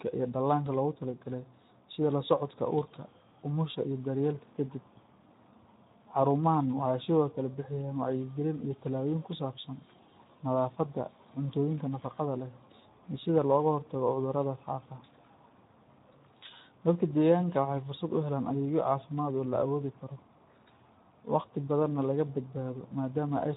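From start to finish the speech carries Speex codec damage, and it's plainly audible. The hoarse, noisy grain fits a low setting of around 11 kbps, where this CELP coder has too few bits to model the excitation properly, so voiced sounds come out rough and noisy rather than clean. If there's any band above 4 kHz, it's just shaped noise filling in, so the upper end sounds hissy instead of detailed.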